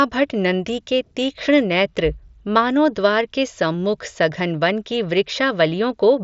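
No technical faults heard.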